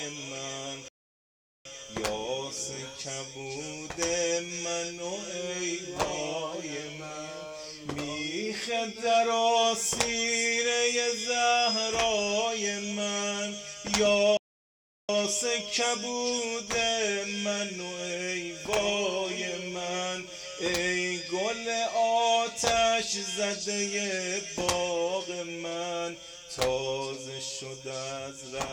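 The audio cuts to silence twice in mid-flow: a playback stall from 0.88 to 1.65 s, about 770 ms, and another from 14.37 to 15.09 s, about 720 ms. Output likely stopped because the player ran short of data or its thread was blocked before playback resumed.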